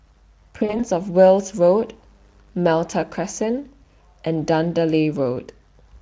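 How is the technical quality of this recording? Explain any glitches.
The recording has one glitch: VoIP packet loss concealed by the speech codec, between 0.59 and 0.86 s. About 100 ms of audio went missing, spread over roughly 200 ms in short gaps, the longest 40 ms, which fits five lost 20 ms frames. The decoder filled each gap by extending its last pitch and filter at falling gain, so the speech briefly smears into a buzzy tone or coloured noise that fades, and stays weak until it recovers. Behind this, the Speex coding adds at most a faint trace of its own.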